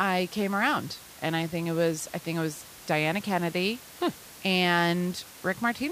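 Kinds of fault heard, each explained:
No kinds of fault are heard in this clip.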